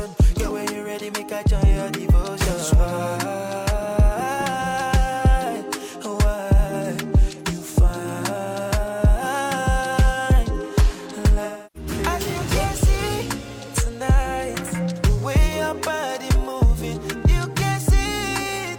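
From 11.44 to 11.90 s the sound turns smeared and noisy, with a phasey, washed-out quality. This is AAC frame loss with concealment: the decoder rebuilt roughly 300 ms of missing frames from the last good spectrum, which points to about seven lost frames.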